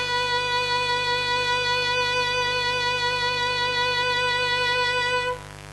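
A steady, raspy buzz sits under this music from start to finish, fairly prominent at roughly 15 dB below the program. It is mains buzz at 50 Hz: switching spikes twice per mains cycle, from a dimmer, rectifier or unshielded lead, spray harmonics up into the kilohertz range. Throughout, the treble also sounds bright yet gritty and metallic, with heavy codec damage and nothing above 11.8 kHz. The likely cause is HE-AAC compression at a very low bitrate, around 16 kbps: spectral band replication copies lower bands upward, so the rebuilt highs carry harmonics that fail to line up across the crossover.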